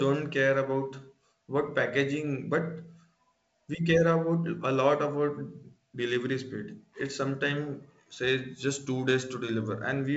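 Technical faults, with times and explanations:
No technical faults can be heard in this speech. The G.722 wideband telephone coding shows as a top end that stops near 7.7 kHz and a light layer of coding noise, which fits its 56 kbit/s mode.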